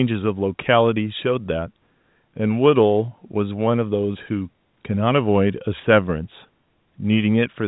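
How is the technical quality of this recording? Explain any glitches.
The technical quality of this recording holds up, with no glitches to explain.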